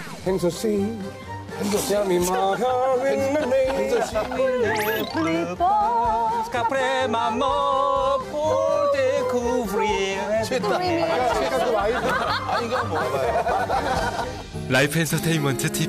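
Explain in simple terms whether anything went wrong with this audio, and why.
Nothing went wrong with this audio. At no point does the sound do anything that points to a technical problem in how it was recorded or passed along.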